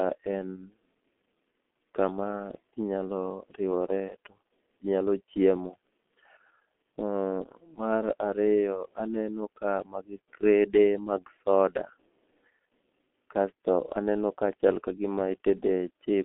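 From start to finish the speech has passed through the G.723.1 codec, an early internet-telephony coder that works in 30 ms frames. Its heavy damage fits a bitrate around 6.3 kbit/s. The line band runs only from 250 Hz to 3.4 kHz, so the speech sounds thin and muffled. Because the codec's vocal model refreshes slowly, consonants smear together and the voice takes on a rough, hoarse grain.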